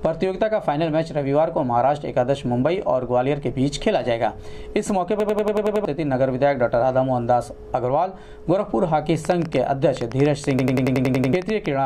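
At 5.20 s a system hang loop kicks in. The driver froze while the hardware kept replaying one 92.88 ms chunk, which fits a 4096-sample buffer, so you get a 10.8 Hz machine-gun stutter until 5.85 s and lose roughly 0.7 s of audio. From 9.25 to 11.67 s there's a train of clicks: around twenty unevenly spaced pops at about 8 per second, poking a few dB above the sound, likely from nearby interference or a faulty connection. Right on top of those clicks, from 10.59 to 11.33 s, the same hang loop comes back, with that 92.88 ms chunk stuttering eight times over.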